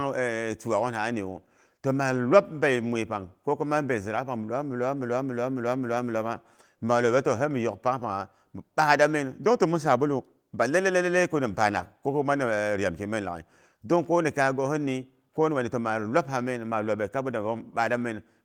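No technical fault can be heard anywhere in the speech. There is nothing to point to at any moment and nothing that needs explaining.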